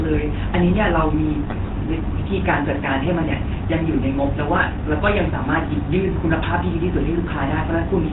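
Speech coded throughout with the GSM full-rate codec: band-limited below 4 kHz, with a buzzy, gravelly roughness from its sparse pulse excitation, consistent with 13 kbps GSM. GSM bit errors corrupt the decoded parameters from 1.46 to 1.56 s and 4.18 to 4.24 s, producing brief squawks, pops and gargling, which are heavier in the first burst.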